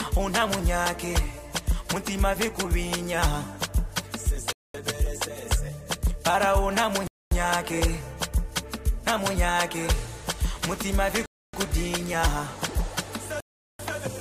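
The audio drops to silence four times, at 4.53, 7.07, 11.26 and 13.40 seconds. The gaps last 0.22, 0.24, 0.28 and 0.39 seconds. Each time the sound resumes after the hole. These are Bluetooth stalls, likely caused by radio interference delaying packets. The headphones' buffer empties, so playback halts. It restarts once the resent data arrives. The gaps grow longer toward the end.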